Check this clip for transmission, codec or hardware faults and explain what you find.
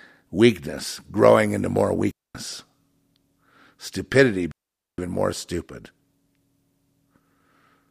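Two digital wireless dropouts interrupt the speech, at 2.11 to 2.35 s and 4.52 to 4.98 s, lasting 0.24 s and 0.47 s. The receiver lost too much data and muted with a very fast fade, leaving clean near-silent holes without noise bursts. On the waveform and spectrogram each shows as a sharp-edged blank gap.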